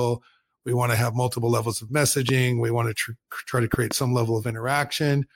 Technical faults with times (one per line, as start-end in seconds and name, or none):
2.29-2.31 loud pop
3.74-3.93 loud pop